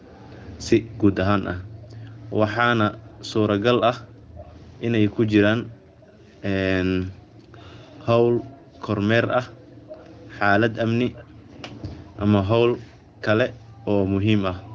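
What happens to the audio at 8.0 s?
At 8.0 s you're inside a stretch, from 1.61 s to the end, where the echo canceller gates the background, pulling room sound down by up to about 40 dB.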